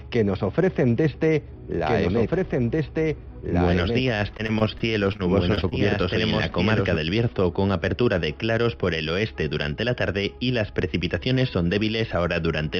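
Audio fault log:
1.74–6.96 s, doubled audio track: For about five seconds a second full-band copy of the sound runs about two seconds behind the original and roughly 5 dB quieter. It's likely a second, slower capture path or an edit holding two copies out of step. Because it's a dry copy with no decay or room colour, it sounds like a clean, late echo rather than reverb, and it cuts in and out abruptly at both ends.
4.37–5.73 s, repeated packet loss (robotic sound): This stretch sits inside the doubled section and breaks up into a run of short holes, the longest about 24 ms. Each hole gets patched by stretching the last bit of sound, and the next one arrives soon after. Roughly an eighth of the span ends up concealed that way, which gives it that choppy, robotic edge with small pieces dropped out.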